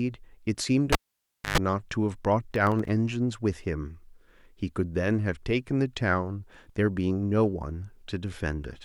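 A speech recording with two technical faults. From 0.92 to 1.58 s there is a pop, then the sound falls to near silence for about 0.6 s, then a short burst of 50 Hz mains buzz lasting about 0.11 s, and a second pop as the speech comes back. This is a cable pulled and plugged in again while live: the buzz comes from the plug's tip making contact before the connection is fully seated. Between 2.52 and 2.89 s a gritty crackle rides on the speech, made of many tiny hard-edged dropouts to silence in quick succession. This is processor overload crackle. The machine handling the audio could not finish its very short buffers in time and missed deadlines again and again. The rapid spacing of the gaps fits buffers of about 0.7 ms, each missed one leaving a sliver of silence.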